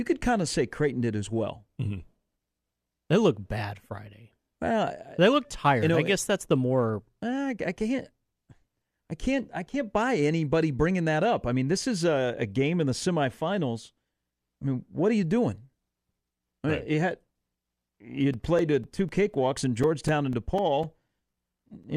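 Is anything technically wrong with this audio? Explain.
Yes. From 18.34 s to 21.84 s the speech is broken by regular ticks every 0.25 s, about fifteen in all, each a gap of a few milliseconds of silence. These are periodic USB or driver dropouts: something stalls the audio path at a fixed interval, dropping brief slices of signal.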